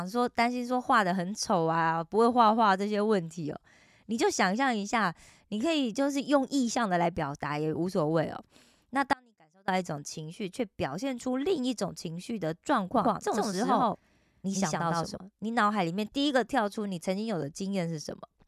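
At 9.13 s the speech drops out for about 0.55 s to a faint residue roughly 30 dB down, likely a brief signal loss; the waveform collapses abruptly to a thin band until 9.68 s.

From 12.96 to 15.18 s a doubled audio track appears, with a dry copy about as loud trailing by roughly a tenth of a second, likely a second capture path; the spectrogram shows every onset repeated.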